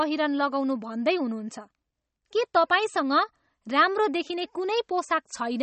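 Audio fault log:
Throughout: MP3 compression, plainly audible across the speech, with nothing above 8.4 kHz and a watery, swirling texture where weak frequency lines flicker on and off between frames; s sounds turn chirpy and metallic and attacks smear. The likely cause is a low-bitrate MP3 encode, consistent with about 32 kbps, cutting the treble to save bits. A plain low-pass filter would remove the top just as cleanly but leave no swirl or chirps.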